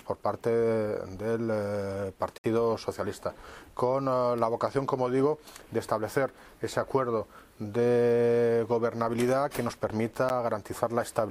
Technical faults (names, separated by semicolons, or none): block of digital silence